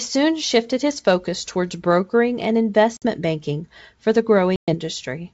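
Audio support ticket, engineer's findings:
Packet loss on an ADPCM call. Hard-edged silent gaps at 2.97 to 3.05 s (after "focus towards brokering and", about 50 ms lost) and 4.56 to 4.75 s (after "banking for the", about 120 ms). Decoder predictor and step size desync, so speech returns slightly distorted on resume. G.722 wideband path at 64 kbit/s is clean.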